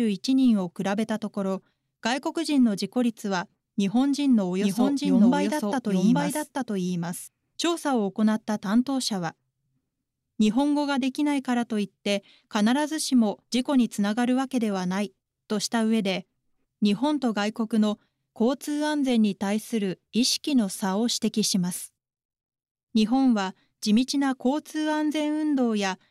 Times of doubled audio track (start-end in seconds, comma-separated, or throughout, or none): 4.62-7.28